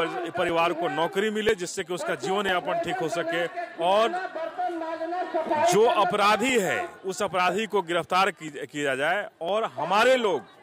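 From 0.49 s to 10.48 s, regular ticks recur almost exactly once a second. These are periodic USB or driver dropouts. Something blocks the audio path at a fixed interval. About a millisecond of sound is skipped each time, leaving a small click.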